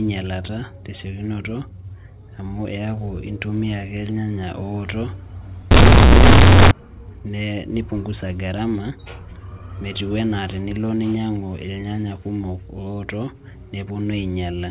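From 5.71 to 6.71 s, companded audio gets read as linear: mu-law bytes played as raw 8-bit samples, so the telephone-band speech turns into loud, buzzy distortion with heavy noise.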